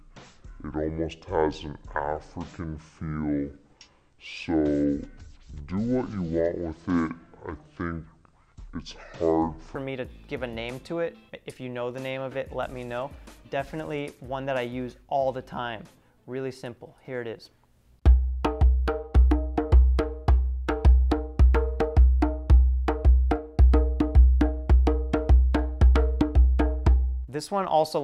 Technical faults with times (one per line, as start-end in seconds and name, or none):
0.00-9.75 section at the wrong speed